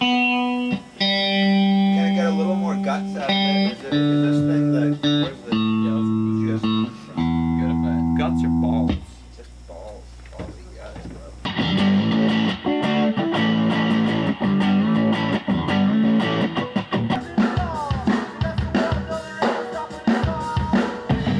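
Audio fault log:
No audible faults detected.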